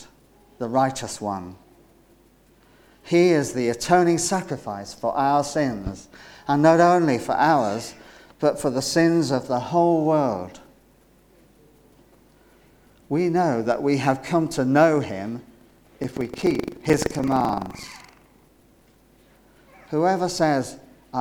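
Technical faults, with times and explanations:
15.57 to 18.99 s, buffer tearing: there's a steady robotic rattle at about 23.4 Hz, which fits a 2048-sample buffer. The app filling the ring buffer and the hardware draining it have drifted, so their positions cross inside each period. About a tenth of every buffer ends up holding stale audio from roughly 150 ms back, spliced in with hard joins on both sides. That repeating splice is the buzz, and it only shows up while there's signal.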